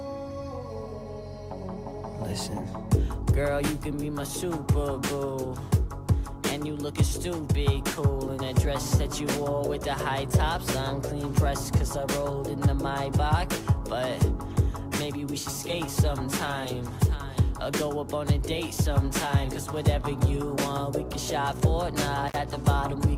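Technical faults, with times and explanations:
22.28–22.36 s, intermittent contact: a loose connection opens for about 42 ms, so the sound drops out to faint hiss, with crackle as the contact breaks and remakes.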